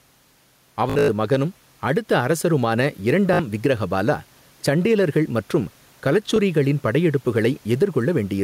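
Throughout the clip the level pumps. The room noise sits about 39 dB below the speech, and the gain swings by around 5 dB under each loud syllable. This gain pumping is likely a fast limiter clamping a microphone gain set far too high.

Bluetooth stutter appears three times. From 0.90 to 1.08 s, just before "மகனும் அடுத்த அரசருமான", about 150 ms of audio drops out in scattered gaps, the longest near 93 ms, heard as a buzzy machine-gun repeat. From 3.34 to 3.39 s, between "மகனும் அடுத்த அரசருமான" and "விக்கிரஹபாலா சண்டேலர்கள் மற்றும்", about 56 ms is replaced by a short repeat. At 6.36 s a single slice of about 19 ms repeats once. In each case the receiver replayed its last buffer while packets were missing, then resumed as if the sound had played on.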